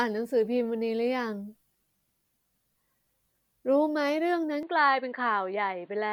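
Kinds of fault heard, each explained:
Input switched to a poorer device: At 4.63 s the speech turns duller and boxier, with nothing above 4.6 kHz. There is no gap or level jump. Faint new background noise sits well below the speech. The likely cause is a switch to a narrower-band input.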